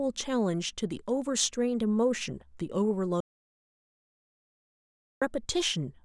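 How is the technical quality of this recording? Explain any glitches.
The recording has one clear fault, an audio dropout to silence. From 3.20 s to 5.22 s the speech cuts off mid-flow and about 2.0 s passes in silence, with no room tone at all. The input was likely lost while the recorder kept writing silence, so everything spoken in that stretch is gone before the sound resumes abruptly.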